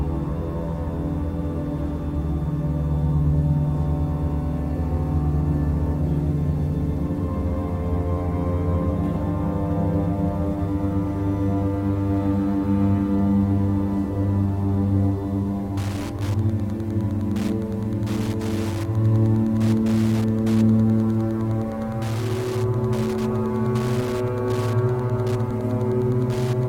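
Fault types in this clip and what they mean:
Wi-Fi interference: a nearby radio's beacon gets rectified by the circuit, so from 15.76 s to the end there's steady ticking every 102.4 ms, roughly 20 dB under the audio.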